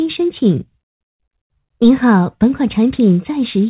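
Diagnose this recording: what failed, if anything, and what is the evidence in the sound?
Nothing failed here; the audio comes through a telephone-grade call path with nothing above 4 kHz, which fits G.711 mu-law at 64 kbps.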